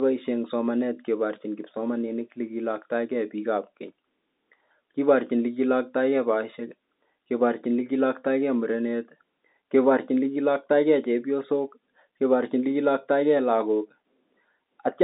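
No technical faults are audible.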